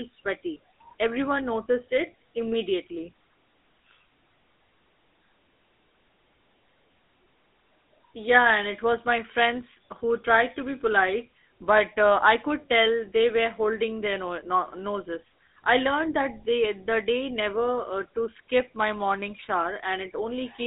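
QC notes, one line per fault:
Throughout, GSM full-rate codec: pulse-excited vocal-tract modelling, fitting a 13 kbps link, leaves buzzy, gravelly roughness on speech, band-limited to 250 Hz–3.7 kHz, nothing above 3.8 kHz.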